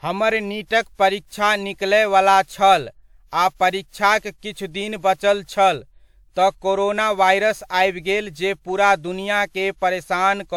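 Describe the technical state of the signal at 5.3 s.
At 5.3 s the speech carries generation loss, present throughout the clip: swirly, hollow, smeared attacks, likely from about five repeated WMA encodes at 128 kbit/s, worse than one pass would leave.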